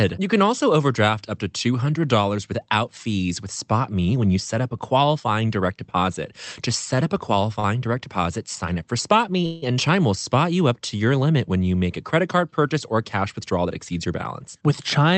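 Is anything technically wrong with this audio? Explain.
Yes. Around 6.95 to 6.99 s and again at 7.60 to 7.66 s, a sound is briefly held and buzzes or dips slightly: short stalls from a late packet, where the receiver stretched audio for 16 and 38 ms until it arrived.

From 9.46 to 9.64 s the audio hangs as a fading buzz or hiss before resuming where it stopped. This call audio freeze inserts about 164 ms of filler, likely because packets were delayed and the jitter buffer emptied.

From 13.32 to 14.98 s the speech sounds hurried but keeps its pitch, running at about 108% speed. This jitter buffer speed-up trims roughly 150 ms in tiny pitch-period slices to reduce accumulated delay.

Through the Opus call path, high frequencies stop near 8 kHz.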